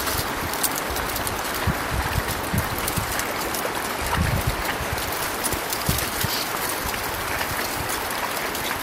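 Loud pops at 5.53 and 6.55 s: sharp single 20 ms thumps about 15 dB above the sound, likely electrical pulses, showing as tall waveform spikes and full-height vertical spectrogram lines.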